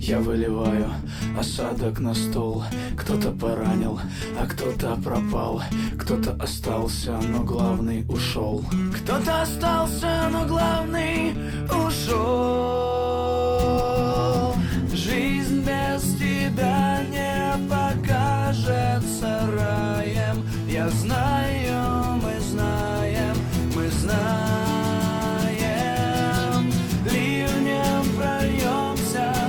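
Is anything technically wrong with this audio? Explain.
No, nothing is technically wrong with this audio.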